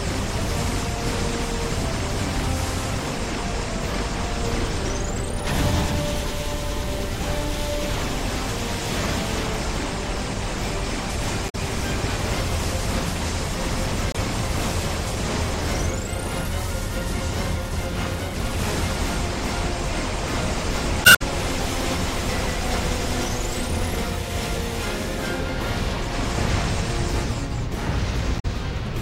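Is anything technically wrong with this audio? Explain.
Yes, there's damaged data in a compressed stream, showing up four times: 11.46 to 11.55 s, 14.12 to 14.17 s, 21.02 to 21.22 s, and 28.36 to 28.45 s. Each time, some bytes in the encoded stream were corrupted, so the decoder misreads those frames, loses sync and hunts for the next valid header. You hear a short chirp or squawk, with the longer one at 21 s lasting about a fifth of a second.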